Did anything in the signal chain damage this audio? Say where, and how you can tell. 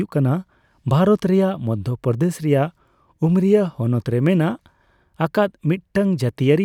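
No, nothing along the chain seems to have damaged this speech, so there's no stage to point to here.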